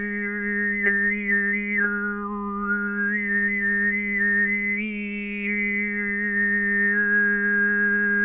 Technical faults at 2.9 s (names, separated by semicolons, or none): none